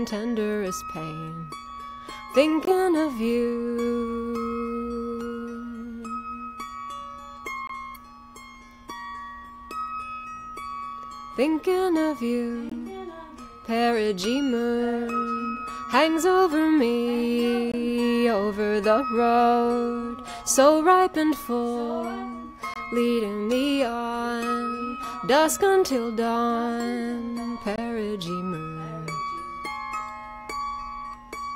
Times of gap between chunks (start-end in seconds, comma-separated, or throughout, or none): 2.65-2.67, 7.67-7.69, 12.69-12.72, 17.72-17.74, 22.74-22.76, 27.76-27.78